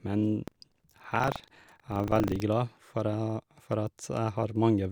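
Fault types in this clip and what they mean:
buffer tearing: playback and write pointers cross each period, splicing in a slice about 70 ms old; a 25 Hz rattle, vertical spectrogram lines every 40 ms.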